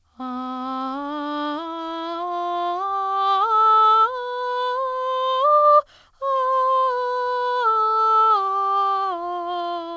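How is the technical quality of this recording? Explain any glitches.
No glitches: the music is band-limited to nothing above 8 kHz with the coding texture typical of a G.722 call path working as designed.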